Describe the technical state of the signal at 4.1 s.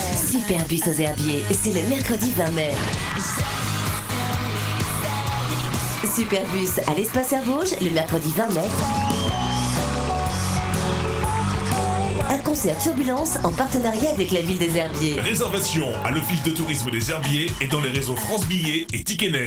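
At 4.1 s the signal is just recovering from a brief dip. From 3.99 to 4.09 s the level falls abruptly by about 6 dB, then returns. This is likely one channel drops out. With one stereo side lost, the mono sum halves.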